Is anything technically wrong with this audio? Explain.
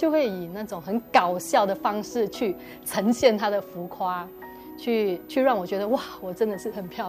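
Yes. A switching supply whistle runs through the whole clip: a thin, high tone wandering between about 13.7 and 14.4 kHz, sitting very roughly 30 dB below the main audio. It comes from a switching power supply whose converter is cycling at an audible rate, either bursting under light load or beating against another supply's frequency. As the load shifts, that rate moves, so the whistle's pitch drifts within that band rather than holding steady.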